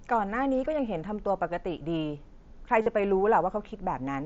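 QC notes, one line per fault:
0.65 s, concealed Bluetooth headset packet loss: a 7.5 ms dropout patched by repeating a nearby waveform stretch, so it's barely audible.
2.82–2.86 s, concealed Bluetooth headset packet loss: a longer 45 ms gap filled by looping the last bit of waveform, giving a buzzy held tone at full level, then a slight warble when real audio returns.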